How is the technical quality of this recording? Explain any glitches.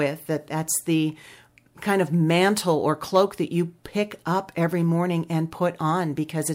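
No glitches or technical faults can be heard here.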